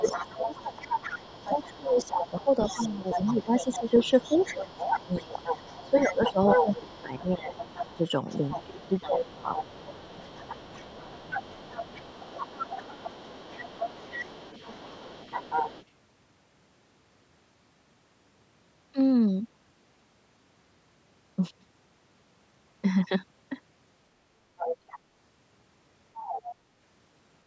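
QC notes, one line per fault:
0.0–0.87 s, 1.18–5.42 s, 5.86–7.54 s, 7.95–8.06 s, 8.53–11.39 s, speech suppressed in double talk: the talker's level sinks by roughly 10 to 20 dB in stretches, deepest near 8.5–11.4 s, while a second voice is present. The likely cause is an echo canceller treating simultaneous talk as echo and ducking everything. Unlike a network dropout, the dips follow the other voice's activity.
0.03–15.85 s, 24.57–24.99 s, 26.14–26.54 s, other side's voice leaking through: a second voice sits roughly 10 dB under the talker, across the first 16 s and as brief scraps near 24.6 s and 26.1 s. This is likely loudspeaker sound reaching the microphone that the echo canceller failed to remove. It differs from room reverberation because it is a separate voice with its own timing, not a smeared tail of the talker.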